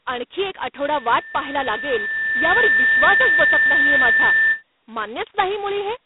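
A harsh, rasping hiss rides on the speech throughout, swelling and fading with its level, and nothing sounds above about 3.9 kHz. That is heavy G.726 ADPCM damage: each sample is coded as a coarse difference from a predicted value, and the roughness fits the 16 kbit/s rate. From 0.79 s to 4.63 s a steady 1.8 kHz tone grows over roughly two seconds into a loudspeaker feedback squeal, ending up around 10 dB above the speech. A microphone is picking up its own loudspeaker, and at that frequency the loop gain exceeds one, so the tone builds on itself.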